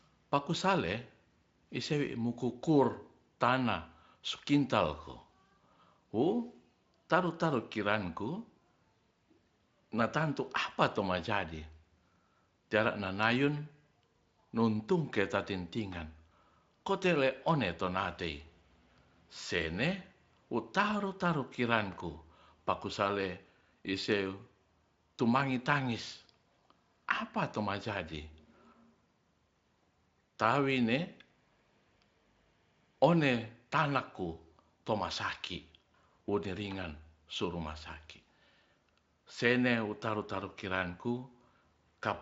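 Nothing technically wrong turns up in this speech recording, which comes through a Speex connection with its top end stopping at about 7.6 kHz and nothing going amiss along the way.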